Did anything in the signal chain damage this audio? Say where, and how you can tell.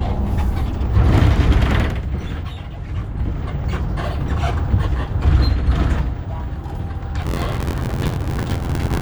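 Yes. From 7.21 s to the end, the driver/buffer stage shows buffer tearing. The software writing the ring buffer and the hardware reading it have drifted until their positions cross within every period, so roughly a sixth of each buffer replays audio from about 20 ms earlier, with hard joins on both sides. The sound picks up a steady robotic rattle at 86.1 Hz, a rate that fits a 512-sample buffer.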